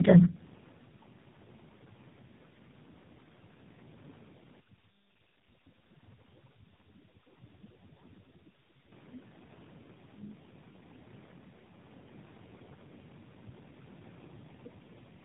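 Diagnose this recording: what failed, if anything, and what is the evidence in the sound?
Tandem speech coding at the codec stage runs throughout: the speech sounds rough, muffled and warbly, consistent with three low-rate speech coders in series, each re-encoding the previous one's damage. A spectrogram shows nothing above 3.7 kHz and smeared, blurry formants, with room noise sitting about 17 dB below.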